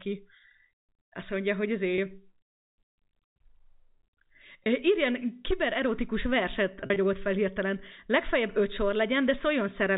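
Packet loss with pitch repetition hits at 1.96–1.98 s right after "mondja hogy" and at 4.64–4.66 s. Each is a brief buzzy hold, consistent with one dropped 20 ms packet, bridged by repeating the last pitch period. At 6.80–6.96 s, between "kibererotikus verset" and "fel hirtelen", scattered losses totalling about 80 ms, with gaps up to 40 ms, give a patch of brief buzzy holds. All of this rides on the narrowband G.711 telephone sound.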